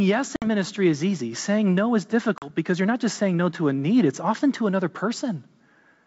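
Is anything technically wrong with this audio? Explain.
Yes. There is packet loss on an ADPCM call, twice: at 0.36 to 0.47 s, just before "ministry is easy", about 60 ms of audio goes missing, and at 2.38 to 2.50 s, after "no is" and before "because you're not just", about 40 ms. Each gap is a hard-edged block of silence, so the waveform drops flat and the spectrogram shows a vertical empty band. Because the decoder's adaptive predictor and step size lose track of the sender's, speech comes back with brief, slight distortion before it settles within tens of milliseconds. The rest of the sound is clean wideband speech reaching about 7 kHz, which fits G.722 at 64 kbit/s.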